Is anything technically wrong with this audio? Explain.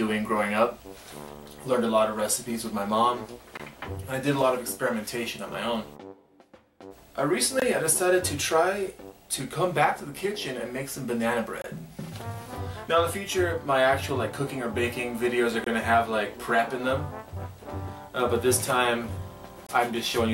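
Yes. Short, hard-edged holes cut into the sound at 3.57, 7.60, 11.62, 15.64 and 19.67 s, each about 23 ms long and spaced every 4 seconds. This is a gap between chunks: the audio was delivered in 4-second pieces with silence left at each join, so nothing is lost but the sound is interrupted.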